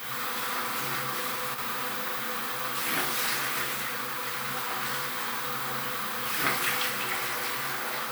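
At about 1.48 s there's a short burst of loose connector crackle, running to roughly 1.66 s. A worn or dirty contact was making and breaking as it shifted, chopping the signal on and off, so you get an irregular scratchy crackle over the sound.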